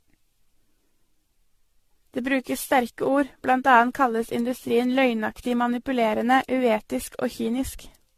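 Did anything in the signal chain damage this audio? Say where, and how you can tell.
Yes, at the codec stage, throughout the speech. The audio has a swirly, hollow, smeared quality with blurred consonant attacks and nothing above 14 kHz. The likely cause is generation loss, with the sound pointing to around ten passes through an AAC-LC encoder at about 64 kbit/s. Each re-encode quantises again on a shifted frame grid, so noise and spectral holes accumulate. A single encode at that bitrate would sound cleaner and less watery.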